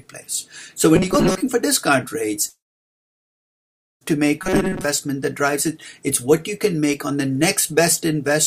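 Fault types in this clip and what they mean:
Robotic sound from repeated short buffers: Two stretches, 0.96 to 1.43 s and 4.41 to 4.84 s, turn the sound into a stiff, metallic buzz that holds at 188 Hz. That pitch fits a chunk of roughly 5.3 ms being replayed over and over, likely because new audio wasn't arriving in time. The first stretch has about half its audio replaced by repeats, and the second has most of it replaced.
Long network dropout: From 2.49 s to 4.03 s the audio simply isn't there, about 1.5 s of it gone for good, likely from the network stream stalling. The receiver briefly carries the last sound forward and lets it fade, then falls to silence for roughly 1.45 s. When the audio returns after 4.03 s, it resumes further along, with the missing section skipped entirely.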